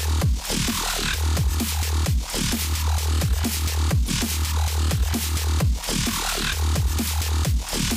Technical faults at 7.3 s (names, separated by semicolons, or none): none